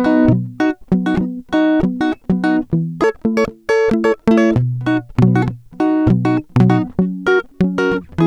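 From 3.04 s to 4.55 s, a section of the music plays at the wrong speed, running 1.35 times faster than the surrounding audio. Speed and pitch shift together: for those one and a half seconds everything rises by about five semitones and sounds hurried, then drops back to normal at the boundary. The cause is likely a playback or editing stage applying the wrong clock rate to that segment.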